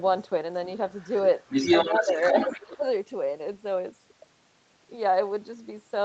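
From 0.73 to 1.21 s there's faint other side's voice leaking through, way down under the talker, likely an echo canceller letting loudspeaker sound slip past. Then from 1.39 to 2.61 s the leak comes back about as loud as the talker. While both are going, there's speech suppressed in double talk: the talker dips slightly from 1.9 to 2.17 s and cuts out much more deeply from 2.47 to 2.85 s, likely as the canceller turns everything down.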